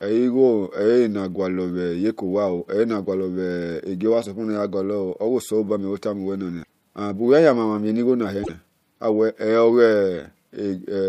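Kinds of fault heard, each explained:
Damaged data in a compressed stream: corrupted bytes make the decoder misread frames and lose sync, causing brief glitches in the speech at 6.60 s and 8.40 s.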